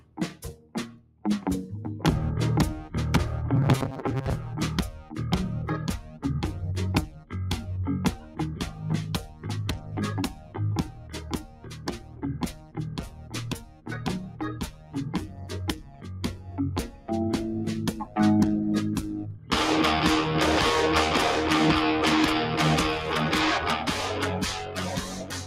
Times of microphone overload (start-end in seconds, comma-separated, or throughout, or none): none